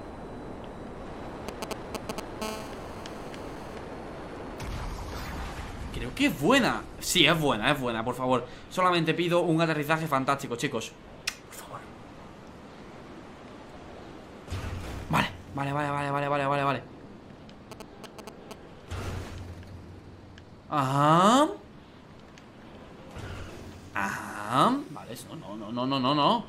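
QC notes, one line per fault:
1.49–2.44 s, GSM signalling bursts: galloping dit-dit-dit ticks and brief 217 Hz buzzes, roughly as loud as the audio. A nearby 2G phone's short radio bursts are rectified by the audio circuit.
2.44–3.75 s, GSM phone buzz: a steady, hard, raspy 217 Hz buzz rich in harmonics, about 13 dB below the audio. The phone now transmits in bursts 217 times a second in a call, and each rectified burst becomes part of the buzz.
17.72–18.53 s, GSM signalling bursts: the same galloping ticks and short 217 Hz buzzes return, somewhat quieter than the audio. The phone is sending brief signalling bursts again.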